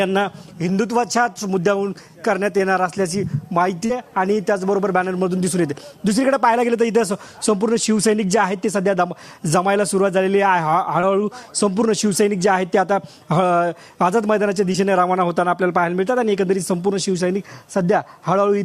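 Short concealed packet loss at 2.58–2.60, 3.86–3.90, 11.00–11.03 and 14.72–14.75 s: audio up to 40 ms long went missing, and the receiver extrapolated the preceding sound to fill each gap, leaving brief smears or wobbles.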